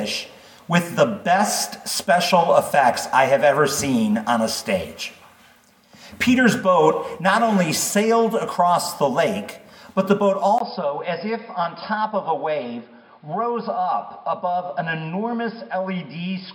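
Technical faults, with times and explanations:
10.58 to 16.55 s, input switched to a poorer device: after a 20 ms gap the audio loses everything above 5.2 kHz, turning dull and boxy, drops about 5 dB in level and gains a new noise floor roughly 35 dB down, likely from recording switching to another microphone.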